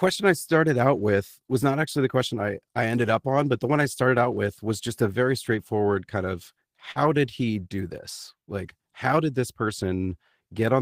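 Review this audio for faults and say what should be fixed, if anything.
A short concealed packet loss sits between 6.91 and 6.98 s, right after "very straightforward kind of" and before "did he do this". About 40 ms of audio never arrived, and the decoder bridged the gap by extending the preceding sound and then crossfading back, which gives a brief smear. On a spectrogram, the harmonics or noise just before the gap run on unnaturally flat for that stretch. Prevention: add jitter-buffer headroom or forward error correction on the transmission path.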